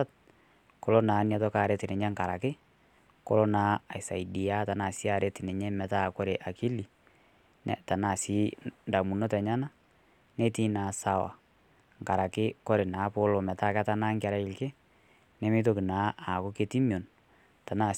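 No technical faults can be heard anywhere in the speech.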